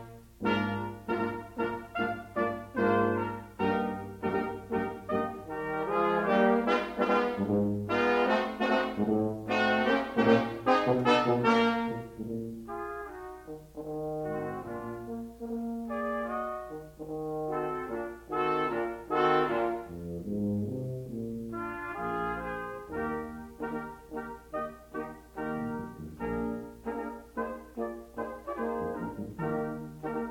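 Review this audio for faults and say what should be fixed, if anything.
Nothing here needs fixing, so you can leave the audio as it is.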